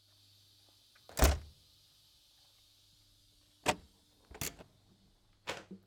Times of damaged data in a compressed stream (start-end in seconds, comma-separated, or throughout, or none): 1.09, 4.62